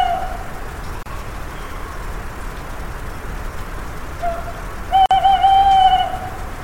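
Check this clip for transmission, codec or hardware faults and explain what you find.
Two brief dropouts interrupt otherwise continuous sound, both a gap at a join of encoded pieces. The first runs from 1.03 to 1.06 s, lasting about 32 ms; the second from 5.06 to 5.11 s, about 49 ms, four seconds later. Separately encoded segments were joined without removing each run's leading encoder delay and final-frame padding, so silence sits at each seam. The gaps have smeared edges, and the sound resumes exactly where it stopped.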